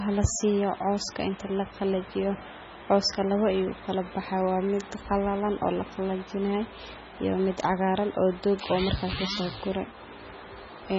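Low-bitrate audio saved at a high bitrate, throughout: the speech has nothing above about 7.7 kHz, and its swirly, smeared low-bitrate texture persists across the whole clip despite a generous container bitrate. The likely cause is an MP3 encoded at a very low rate, roughly 16 kbit/s, then re-saved as a 320 kbit/s MP3. The second pass enlarged the file but could not restore the band or detail the first encode had discarded.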